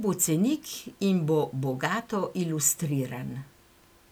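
Nothing in this recording trips up the ear at any point, so there's no fault here to walk through.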